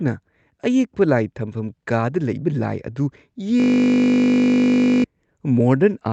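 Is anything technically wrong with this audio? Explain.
Yes. From 3.6 to 5.04 s there is a system hang loop. The system froze while the sound hardware kept replaying one 20 ms piece of its ring buffer. That piece repeats exactly, making a steady 50 Hz buzz. About a second and a half of speech is lost.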